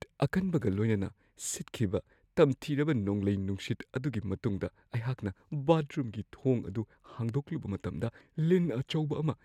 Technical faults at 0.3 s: none

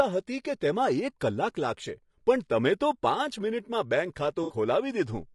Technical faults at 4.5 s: low-delay AAC compression; AAC frame loss with concealment

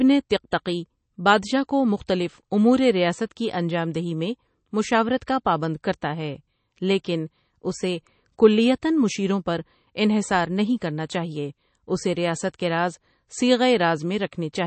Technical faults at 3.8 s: MP3 compression

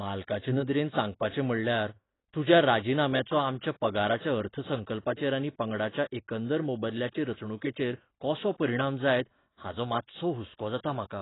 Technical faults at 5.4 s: AAC compression

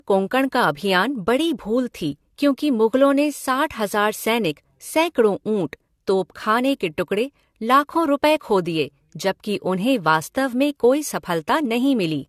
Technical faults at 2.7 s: generation loss

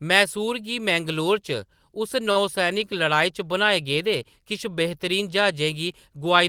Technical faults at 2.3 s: short stall from a late packet

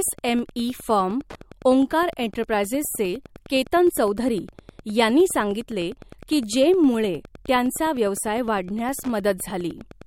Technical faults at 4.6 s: Wi-Fi interference

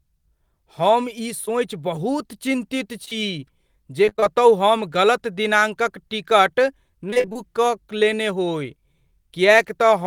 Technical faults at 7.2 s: repeated packet loss (robotic sound)

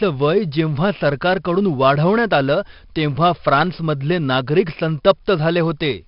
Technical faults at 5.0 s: 4-bit ADPCM compression

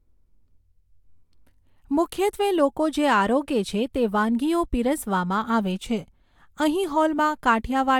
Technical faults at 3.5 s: none

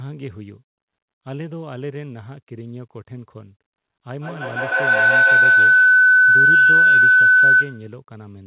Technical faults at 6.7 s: feedback howl

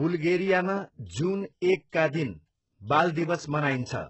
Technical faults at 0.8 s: HE-AAC compression

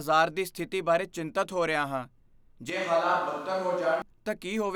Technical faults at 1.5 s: none

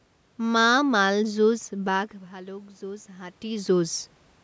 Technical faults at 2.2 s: automatic gain rising

